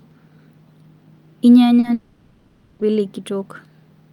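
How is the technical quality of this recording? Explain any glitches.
The recording has two network glitches close together, both in the middle of the speech.

Short concealed packet loss, 1.79 to 1.85 s: about 40 ms of audio arrived too late for the decoder, so the receiver stretched the preceding sound across the gap and blended back in. It comes across as a brief smear or wobble in the speech.

Long network dropout, 1.93 to 2.81 s: for about 0.88 s the speech is replaced by a continuation of the last sound, a drawn-out buzzy or hissy fill with no true silence, before real audio resumes further on. The likely cause is a stretch where no packets arrived at all, so the receiver kept synthesising sound for roughly 860 ms and that part of the speech is lost.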